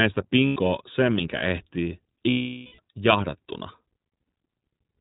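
The iLBC codec runs throughout the speech: the band stops at 4 kHz and voices sound plainly rough and synthetic, consistent with its 20 ms, 15.2 kbps mode. Lost iLBC frames appear at 0.46–0.57 s, just before "sen minkä ehtii", and at 2.30–2.80 s, right after it. The decoder repeats the last pitch cycle with noise, giving a held buzzy vowel that fades across the longer gap.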